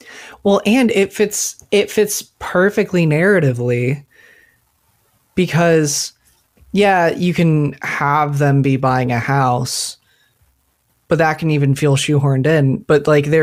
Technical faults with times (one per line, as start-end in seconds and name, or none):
none